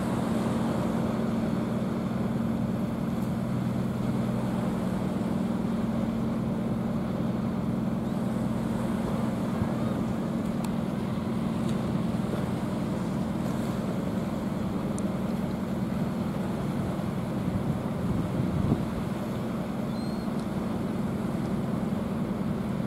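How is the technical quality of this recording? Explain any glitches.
No glitches turn up anywhere here, so there's nothing to explain, and the technical quality holds steady all the way through.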